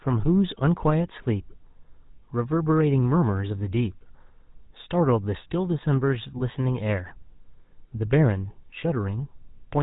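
GSM full-rate coding runs through the whole clip, and its damage is plainly audible. The codec rebuilds speech from a vocal-tract model driven by sparse, evenly spaced pulses, discarding everything above 4 kHz. That leaves a dull, band-limited sound with a buzzy, gravelly edge, which fits a 13 kbps full-rate stream.

Lost GSM frames follow from 6.38 to 6.42 s. The gap points to a single 20 ms frame going missing. The decoder filled it by repeating the previous frame's settings, so the sound briefly hangs as a short metallic, rough ring.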